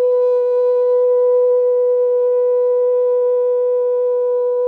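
A short piece of music with nothing technically wrong to hear in it.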